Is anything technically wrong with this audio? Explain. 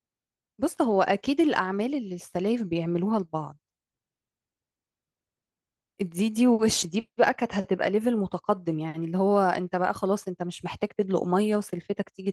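No, nothing is technically wrong.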